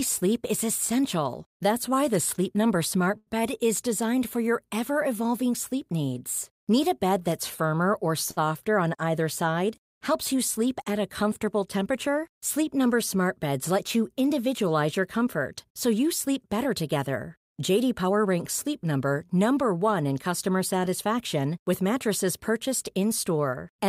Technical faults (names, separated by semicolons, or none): short stall from a late packet; jitter buffer speed-up